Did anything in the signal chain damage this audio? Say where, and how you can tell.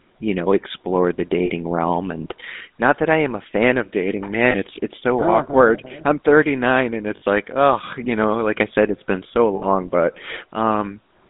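Yes. At the codec stage, GSM full-rate coding runs throughout. The sound is confined to about 200 Hz to 3.7 kHz, with a plainly buzzy, gravelly roughness.

Over the network, lost GSM frames occur at 1.46 s after "you know explore the", 4.5 s after "a fan of dating", 7.16 s and 9.56 s after "said it's been so". They last 40 to 60 ms. Each gap rings metallically because the last good frame repeats.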